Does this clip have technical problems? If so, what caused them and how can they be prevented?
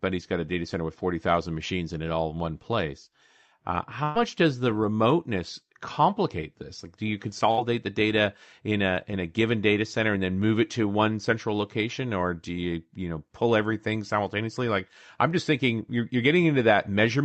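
Yes. A burst of packet loss hits at 4.03 to 4.18 s, before "does the remoteness complicate", and at 7.51 to 7.60 s, between "do you" and "the data in a". The receiver stretched and faded the last sound, then skipped ahead. Stronger forward error correction or a steadier network connection would prevent this.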